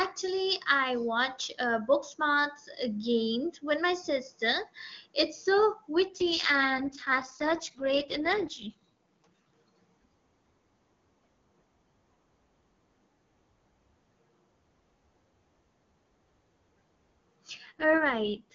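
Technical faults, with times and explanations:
6.06 to 9.52 s and 17.65 to 18.54 s, AMR rate drop: the wideband AMR-WB codec, clear and nearly clean elsewhere, was pushed from its top mode down to one of its lowest, which fits a switch from 23.85 to 6.6 kbit/s, with the freed bits going to error protection on a weak link. The speech keeps its full band and never breaks off, but turns rough, raspy and synthetic until the rate recovers.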